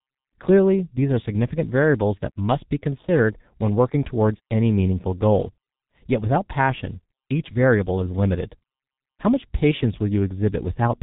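From start to finish the speech has been squeezed through the G.723.1 codec, and it's pretty rough going. Nothing gets through above 3.8 kHz, so it's muffled and hoarse with smeared consonants, which fits a very low 6.3 kbit/s stream.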